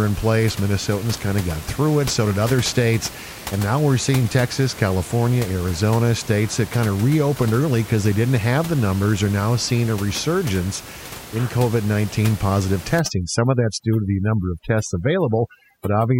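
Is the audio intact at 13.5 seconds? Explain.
No. Overdone noise removal runs from 12.99 s to the end at 16.2 s, so 13.5 s falls inside it. The noise reducer is pushing individual frequency bands down or out wherever they sit close to the room noise, taking quiet parts of the speech with them. The background drops and breaks up into twinkling specks.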